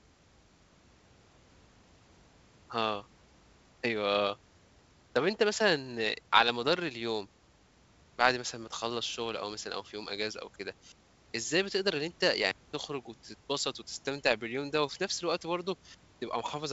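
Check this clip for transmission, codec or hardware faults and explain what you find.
Nothing here points to a fault; the speech comes through G.722 wideband telephone coding with its usual ceiling, nothing above about 7.8 kHz, and the coding itself leaves at most a faint trace.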